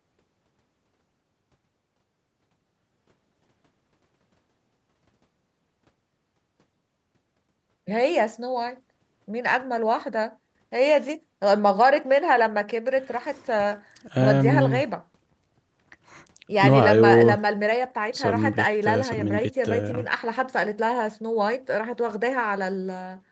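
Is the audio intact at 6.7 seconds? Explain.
Yes, the speech is intact at 6.7 seconds, with nothing there beyond the ordinary call-path sound, its top end stopping at about 8 kHz.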